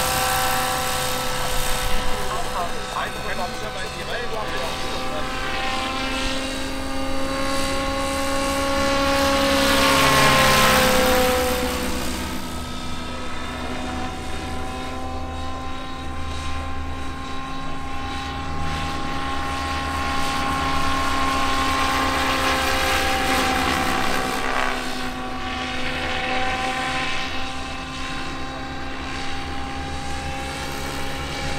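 From 1.51 to 4.59 s, GSM signalling bursts break in: a galloping dit-dit-dit of brief buzzes at about 217 Hz, at roughly 10 dB below the signal. A nearby 2G phone is exchanging short groups of radio bursts, and the audio circuitry rectifies them.

From 4.64 to 7.97 s this becomes a continuous GSM phone buzz, a hard, raspy 217 Hz tone rich in harmonics, about 20 dB below the signal and unrelated to it. The phone is now in a call, transmitting steadily 217 times per second, and each rectified burst lands in the audio.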